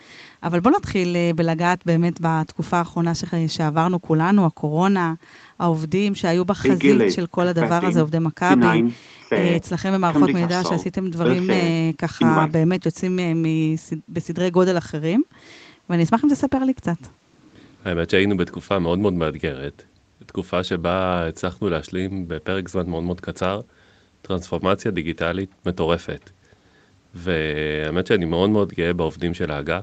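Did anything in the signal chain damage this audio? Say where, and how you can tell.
No, the speech carries only the expected imprint of a call chain, with nothing above 8 kHz, which fits the call's microphone processing and an Opus codec running at wideband, and no stage between microphone and playback has left any damage that can be heard.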